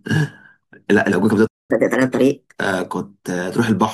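A speech clip in which the sound cuts out abruptly in mid-flow at 1.47 s and stays silent for about 222 ms, until 1.71 s, before resuming from the point where it stopped. That gap is a playback stall. The player most likely ran short of data or had its output thread held up, so nothing reached the output until it recovered. Right after the gap, from 1.71 s to 2.60 s, the speech rushes ahead at 1.25 times normal speed with its pitch raised by around four semitones, giving a brief chipmunk quality, and then settles back to normal. This is catch-up at higher speed: to win back the time lost in the stall, the player resamples its backlog faster, which lifts speed and pitch together until it is back on schedule.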